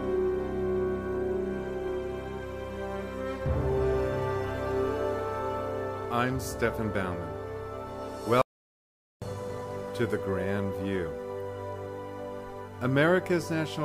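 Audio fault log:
8.42–9.22 s, audio dropout to silence: the sound stops abruptly in mid-flow and the signal falls to silence for about 0.8 s, with no room tone or noise floor underneath, then resumes just as suddenly. Pure silence rather than a fade points to the input being lost while the recorder kept writing samples, likely a momentary disconnection, failed link or brief mute upstream. Whatever occurred during that 0.8 s is not recoverable.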